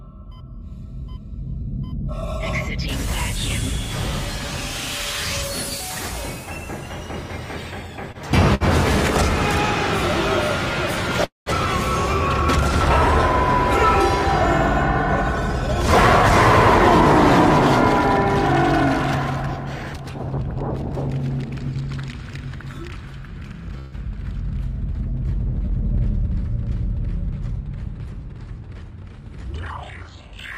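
Two short stalls from a late packet at 8.12 s and 8.55 s hold the sound about 25 ms and 60 ms too long, then pick up where it stopped. At 11.25 s a call audio freeze drags the last sound into a fading fill that drops to silence for about 160 ms, and at 23.79 s 134 ms of fill holds with no silence; in both cases nothing is lost, and packets held up until the jitter buffer ran dry are the likely cause. There's also jitter buffer speed-up at 19.56 to 20.53 s, 21.20 to 21.81 s and 27.58 to 29.13 s: the receiver trims tiny pitch-period slices to cut the backlog, so the audio runs about 6 to 8% fast at the same pitch and feels a touch hurried.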